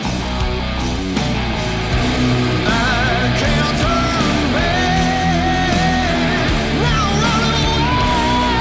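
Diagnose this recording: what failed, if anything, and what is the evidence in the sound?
Nothing failed; the call path sounds as intended, with the band stopping at about 8 kHz, which fits a wideband G.722 codec.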